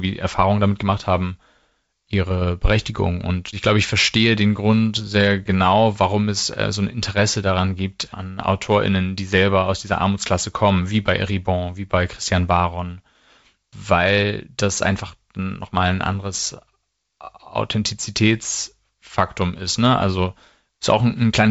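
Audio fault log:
No fault to log for this audio.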